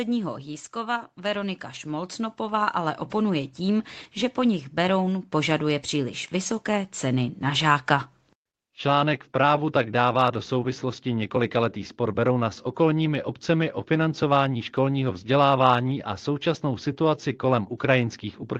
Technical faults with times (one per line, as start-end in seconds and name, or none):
0.72-7.46 automatic gain rising